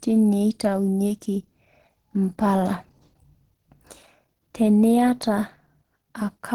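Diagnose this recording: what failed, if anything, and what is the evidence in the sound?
Codec stage: likely Opus compression throughout. Speech sounds muffled, hoarse and grainy, fitting Opus's hybrid speech mode near 16 kbps, though bandwidth stays full.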